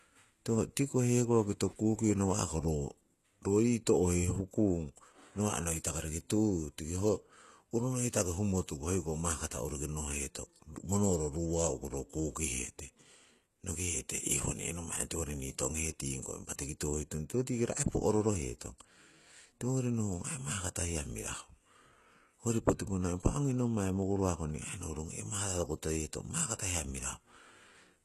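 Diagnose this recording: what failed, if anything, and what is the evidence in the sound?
Throughout the speech the treble sounds synthetic: s sounds come out gritty and lispy, with nothing at all above 12.3 kHz. The fault sits at the codec stage, likely HE-AAC compression at a rate near 16 kbps, where spectral band replication rebuilds the upper band from copied lower bands, so its harmonics misalign.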